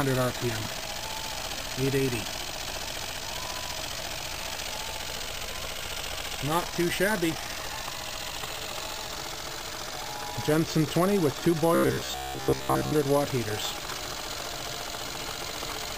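From 11.75 to 12.92 s the sound turns into a rigid, metallic buzz at about 66.7 Hz: robotic sound from repeated short buffers. The likely cause is audio arriving too seldom, so playback loops a slice of roughly 15 ms and skips most of the real material. On a spectrogram this appears as evenly spaced horizontal harmonic lines at multiples of 66.7 Hz; the waveform shows the same short shape repeating every 15 ms.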